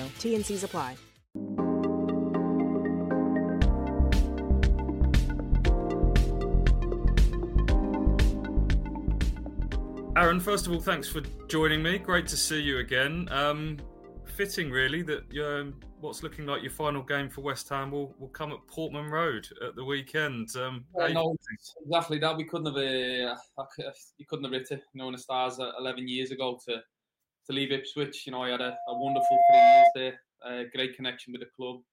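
Loudspeaker feedback squeal from 28.61 to 29.97 s: a 693 Hz tone swells over about a second to roughly 15 dB above the audio, as the microphone-to-speaker loop exceeds unity gain.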